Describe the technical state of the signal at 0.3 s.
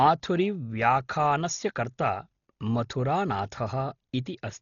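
At 0.3 s the speech sounds dull and muffled, with rough, fluttering noise clinging to voiced tones and nothing above about 6.9 kHz, as it does throughout. This is likely Dolby Digital compression at a very low bitrate, which fits roughly 32 kbps: the encoder narrows the band and gives many frequency lines no mantissa bits, and the decoder fills those starved lines with dither noise.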